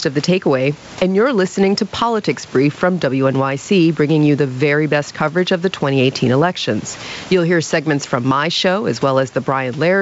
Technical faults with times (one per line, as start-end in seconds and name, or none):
0.00-10.01 gain pumping